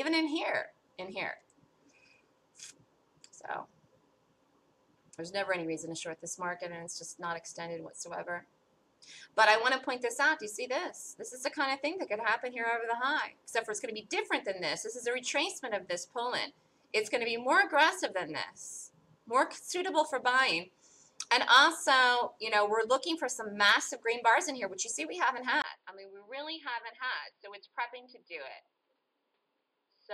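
At 25.62 s the sound drops out for about 20 ms. When it returns, it is duller and boxier and stays that way to the end. Nothing above 5 kHz remains. The level falls by roughly 10 dB. A new, faint noise floor appears well beneath the signal. This pattern points to an input switched to a poorer device, likely a different microphone or a headset's call profile with a narrower band and its own tone and noise.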